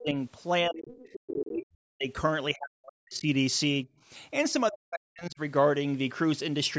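A speech clip in which the talker's voice repeatedly sinks or cuts out in pieces, at 0.0–0.1 s, 0.66–1.01 s, 1.28–2.07 s, 2.53–3.27 s and 4.7–5.4 s, falling by as much as roughly 40 dB. This is speech suppressed in double talk, likely from an echo canceller that heard both parties at once and turned everything down. Between 0.91 and 1.27 s a second, quieter voice, about 15 dB below the talker, comes through. This is the other side's voice leaking through, likely loudspeaker echo the canceller failed to remove, heard within the call path's normal band, which stops at 8 kHz.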